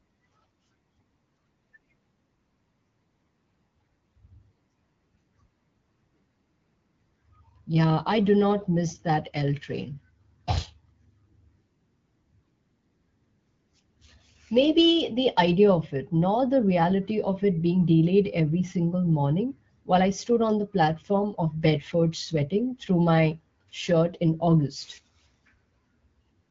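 No technical faults are audible.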